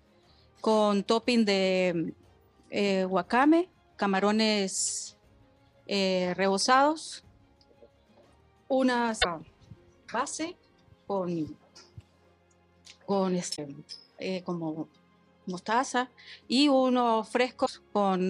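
At 9.21, 13.55 and 17.65 s the sound jumps ahead with a glitch of about 40 ms, roughly two 26 ms MP3 frames, each showing as a vertical smear or gap on the spectrogram and a waveform discontinuity. A broken MP3 bit reservoir is the likely cause.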